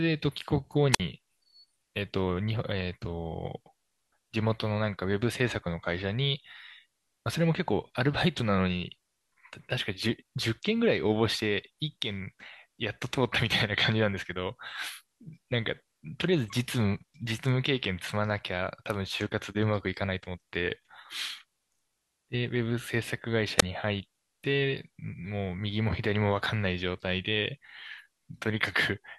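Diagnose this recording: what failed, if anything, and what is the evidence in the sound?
The failure is in the analogue radio link, a wireless microphone squelch dropout, occurring at 0.92 to 1.00 s and again at 23.57 to 23.63 s. The speech falls into near silence for about 52 ms and about 24 ms. The RF signal fades, and the receiver's squelch mutes its output. Unlike a network packet-loss gap, which cuts cleanly with no warning, the mute here is preceded by a short rise of hiss as the carrier weakens.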